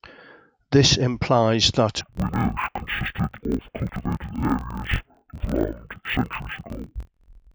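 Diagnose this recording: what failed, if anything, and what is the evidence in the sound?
From 2.01 s to the end, the speech drops an octave and sounds doubled and choppy, with chunks about 23 ms long (fitting a 1024-sample block). The pace stays normal, which rules out a sample-rate mismatch. This is interleaved audio read as planar at the sample-format conversion stage: each block's halves play together at half speed.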